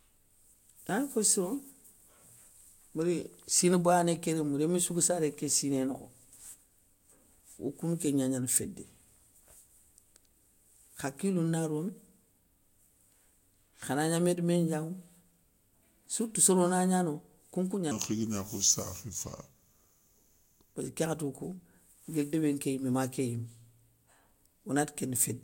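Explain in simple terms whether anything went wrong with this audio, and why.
Between 17.91 and 20.75 seconds the speech turns slow and deep: this is a section at the wrong speed. For those three seconds the audio plays at 0.771 times its proper rate, a bit over three quarters speed, so everything stretches out and the voice drops by about five semitones. Speed and pitch move together because both come from the same playback rate. The likely cause is an editing or playback step that used the wrong clock for that stretch.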